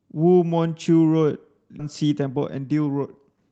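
At 1.79 s there's a skip ahead: roughly 0.7 s of speech got dropped, probably because the jitter buffer overflowed while newer audio was already queued, so playback leaps forward and splices the two sides together with no gap at all.

Right after, from 1.89 s to 3.50 s, the jitter buffer speed-up kicks in. To shed the extra delay it trims tiny pitch-period slices over and over, playing at 115% speed with the pitch unchanged. That's about 0.3 s cut, and the speech sounds rushed. Through all of this the Opus call audio tops out around 8 kHz.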